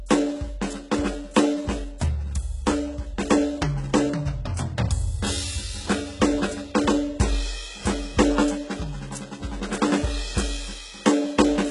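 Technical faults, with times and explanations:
Throughout, likely HE-AAC compression: nothing above 11.1 kHz, and the treble sounds copied upward, gritty and metallic, which fits a starved bitrate near 12 kbps.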